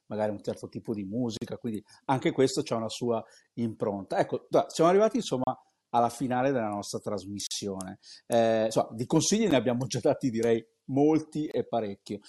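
The speech drops out briefly at 1.37–1.42, 5.44–5.47, 7.47–7.51, 9.51 and 11.51–11.54 s: gaps between stream segments. The 2-second segments' timestamps don't quite meet, so the player fills in hard-edged silences of roughly 10 to 44 ms.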